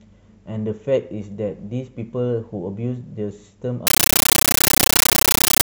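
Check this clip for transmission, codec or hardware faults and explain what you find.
One transmission fault: from 3.87 s to the end, the speech is replaced by harsh, very loud chattering static. This is a compressed stream played as audio. Undecoded Dolby Digital data, which fits an AC-3 stream, is treated as raw samples, producing 13.3 ms noise bursts separated by silent padding and repeating 31.25 times a second.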